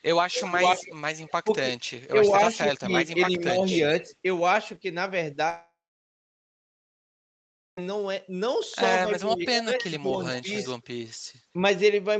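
From 0.34 to 1.91 s a second copy of the speech trails the original by about a quarter second (252 ms), at about 10 dB below it. This is an echo leak, likely from a far-end loudspeaker whose echo canceller let part of the signal back through. A much fainter trace, about 30 dB down, follows at 4.11 to 4.15 s.

Between 0.49 and 1.48 s the talker's level dips in brief pieces, about 0.2 s in total and up to roughly 15 dB at the deepest. From 2.3 to 4.11 s there are shallower dips of about 5 dB, around 0.3 s in total. This is speech suppressed in double talk, likely because the canceller could not separate the talker from the echo while both sides were active.

At 5.49 s the sound turns into a fading continuation and then about 2 s of silence. It returns at 7.79 s, with roughly 2.3 s of content missing. This is a long network dropout, likely caused by packets that never arrived.

From 9.07 to 10.47 s the speech dips again, up to roughly 10 dB over about 0.4 s. 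Overlapping this, from 9.55 to 10.68 s, the echo returns 258 ms behind the speech at about 10 dB down.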